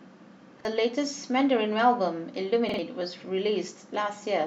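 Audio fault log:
0.60–0.65 s, repeated buffer: the playback device ran short of fresh data and replayed its last block of about 46 ms once, which fits a 2048-sample buffer. The speech stutters with a hard join, and roughly 50 ms of real audio goes missing. Unlike a dropout, the hole is filled with copied sound rather than silence.
2.69–2.79 s, repeated buffer: the same 46 ms block sounds three times in a row, so the stutter is longer, and about 100 ms of speech is lost. The exact repeats set it apart from a single click or a simple cut.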